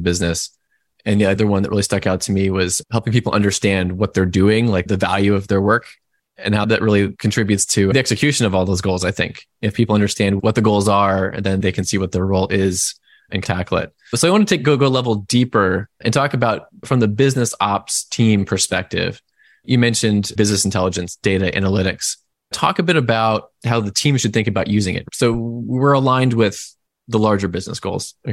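A supply switched on or off at the live input sent a voltage step through the coupling capacitors, causing a phantom power thump at 25.34–25.41 s: a deep knock of about -18 dBFS that dies away within 16 ms, just before "aligned with the".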